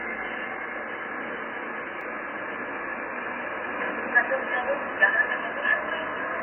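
From the first second the whole clip sounds dull and smeared, with nothing above about 3.3 kHz and a fizzy, warbling texture on sustained sound. That points to heavy AAC compression, likely AAC-LC at a very low bitrate around 16 kbps, with the encoder cutting the top end and thinning out bands it can't afford.

At 2.01 s there's a block of digital silence, a hole of about 2.7 ms where the output drops straight to zero and back with no fade. The hard edges make it land as a sharp tick. That length fits a 128-sample buffer that wasn't filled in time.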